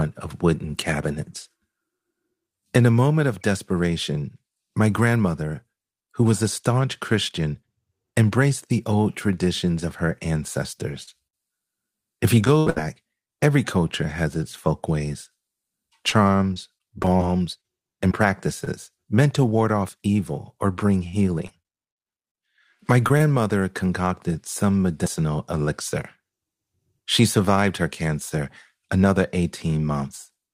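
At 11.03 to 11.09 s a brief smear passes through the speech. This is short concealed packet loss: about 40 ms never arrived, and the receiver extended the preceding sound to cover it. At 11.27 to 11.35 s the last sound is held and fades out, and the speech picks up further along. This is a burst of packet loss, about 60 ms gone, with the last sound carried on and faded across the hole. From 12.45 to 12.78 s the speech turns choppy and robotic. This is repeated packet loss: four gaps, the longest 73 ms, were patched, and concealment fills nearly half the stretch. From 16.1 to 18.68 s, just before "meant to ward off", the speech stays clear but hiccups now and then. These are scattered short gaps, around ten isolated losses, none longer than roughly 30 ms. From 21.08 to 22.38 s, right after "off evil or bring", a choppy, broken quality returns. This is repeated packet loss again, nine gaps totalling 180 ms, the longest 44 ms. 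Finally, 23.08 to 23.12 s and 23.18 to 23.22 s carry two brief smears just before "concocted some medicinal elixir". Each is short concealed packet loss of about 20 ms, patched from the preceding sound.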